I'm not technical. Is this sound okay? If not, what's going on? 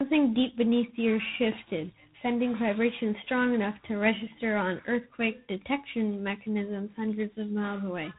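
No, not quite. The whole speech clip has G.726 ADPCM damage, the kind of low-rate phone coding cordless phones use. It cuts everything above about 3.9 kHz, so it sounds muffled, and adds a harsh, rasping hiss that gets louder whenever the speech does.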